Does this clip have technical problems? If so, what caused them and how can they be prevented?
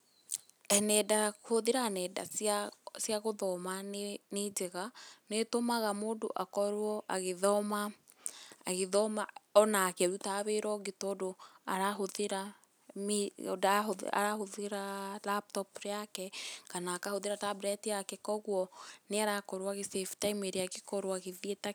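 No, the recording shows no audible technical faults, so there is no cause to trace and nothing to prevent.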